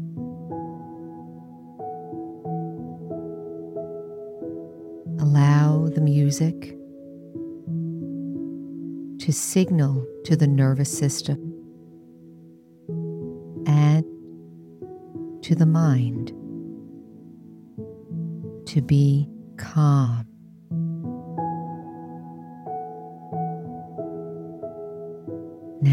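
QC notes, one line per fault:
Nothing to flag here, as I didn't hear anything worth noting anywhere in the clip.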